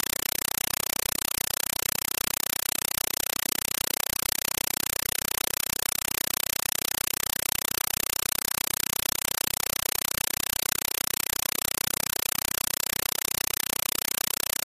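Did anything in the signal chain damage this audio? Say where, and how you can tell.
Yes. The damage is at playback, on the digital link: a compressed stream was played as audio. From start to end the sound is replaced by very loud, chattering static that pulses about 31.25 times a second, each burst roughly 5.33 ms long and followed by silence. That pattern fits an undecoded AC-3 frame structure, likely at around 256 kbps. Unlike clipping or hiss, nothing of the original sound shows through, only rhythmic data bursts.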